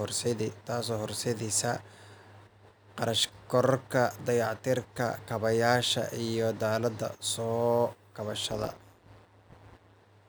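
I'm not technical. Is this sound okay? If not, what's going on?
No. Near the end, from about 8.50 to 10.01 seconds, the speech takes on a rough, buzzy, robotic wobble. This is called overlap-add ripple. The audio was chopped into short overlapping slices and stitched back together, but the slices don't blend evenly. So the loudness dips and swells with every slice, roughly 150 times a second. That is far too fast to hear as separate pulses. It comes across as a metallic buzz over the voice instead.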